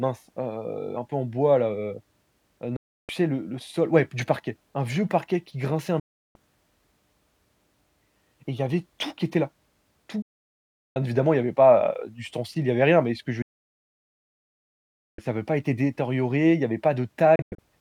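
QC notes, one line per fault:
2.76–3.09 s, 6.00–6.36 s, 10.22–10.96 s, 13.42–15.19 s, 17.36–17.59 s, digital broadcast dropout: the receiver loses valid frames and mutes within about 3 ms, so speech stops dead and resumes mid-flow at "bon bien évidemment il" and "ça avait pas été". Gaps run 0.16 to 1.76 s, in steps consistent with 32 ms frames. The last one after "y avait" breaks into short holes of up to 96 ms. Waveform and spectrogram show silent, full-band blank blocks with sharp edges.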